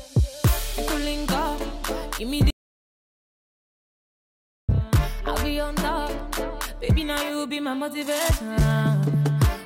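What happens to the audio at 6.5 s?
At 6.5 s the audio carries on intact, with no dropout, click, distortion or other audible fault at that point.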